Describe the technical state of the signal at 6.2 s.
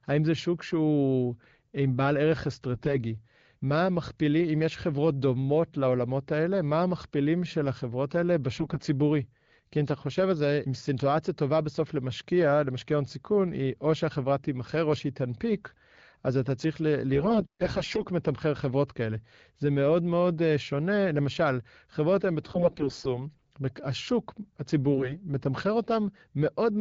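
At 6.2 s the speech is intact, with no fault at that moment, and it carries the light band-limited character of AMR-WB coding at 12.65 kbit/s, which keeps speech clear.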